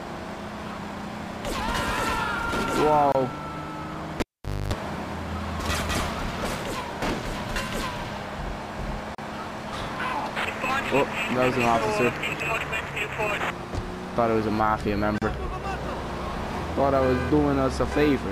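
From 3.12 to 3.15 s, and again at 9.15–9.18 and 15.18–15.22 s, a gap at a join of encoded pieces opens: a 27–34 ms gap with smeared edges, so less of it is fully silent. It recurs every 6 s, and the sound resumes where it stopped, with no click or hum.

Between 4.2 and 4.73 s the cable is pulled and plugged in. A pop gives way to near silence, then about 0.26 s of 50 Hz mains buzz, and a second pop brings the sound back. Those pops and that buzz set it apart from the clean codec gaps.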